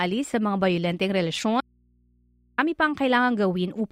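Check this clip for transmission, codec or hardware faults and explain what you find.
There's one clear fault: an audio dropout to a faint residue from 1.61 s to 2.58 s. The speech cuts off abruptly and stays gone for nearly a second, about 0.97 s, and the gap holds only a low mains hum, roughly 40 dB below the speech. It doesn't sound like a pause or a fade. The likely cause is the signal feed breaking while the input stayed live and picked up hum before the speech snapped back in.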